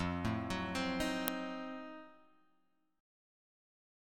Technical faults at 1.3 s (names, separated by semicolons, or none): uninitialised buffer